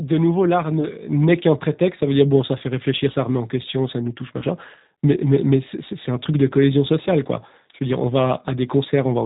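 G.729 codec damage runs through the whole speech clip and is plainly audible. The sound points to G.729A at 8 kbit/s, which rebuilds each 10 ms frame from a vocal tract filter, a pitch predictor and a handful of pulses rather than the original waveform. Nothing above 4 kHz survives, so the speech is band-limited, with the rough, synthetic edge that comes from that coarse modelling.

VoIP packet loss concealed by the speech codec appears first at 0.81 s, lasting about 38 ms, which fits a single lost 10 ms frame. It appears again at 4.39 s, lasting about 64 ms, which fits three lost frames in a row. Each time, the decoder repeats its last pitch and filter at falling gain, stretching the sound into a buzzy tone or coloured noise. Because every frame depends on the one before, the distortion continues past the gap itself.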